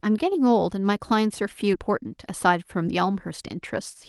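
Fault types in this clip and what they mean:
Skip ahead: at about 1.73 s the speech jumps forward with no gap, because a stretch of about 0.4 s was discarded while later audio was already queued, so the sound on either side of the cut is spliced almost directly together.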